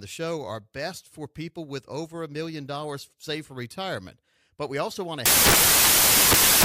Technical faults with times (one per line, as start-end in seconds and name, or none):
5.26-6.64 samples built from the wrong bytes